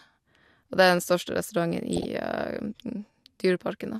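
A speech clip with DAB burbling from 1.93 to 2.05 s: a short burst of noise blips over the speech in single sub-bands. Bit errors at a rate of around 0.2 percent slip past error correction, corrupting MP2 audio data across what sounds like roughly eight frames.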